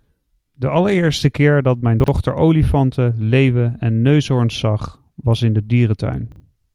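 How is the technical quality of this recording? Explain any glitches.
The recording has two brief glitches, both chunks out of order, at 2.0 to 2.08 s and 6.32 to 6.4 s. In each, a 40 ms piece of audio plays one chunk late, swapped with its neighbour, giving a jumbled flicker. Unlike a dropout, nothing is missing; the sound is only reordered.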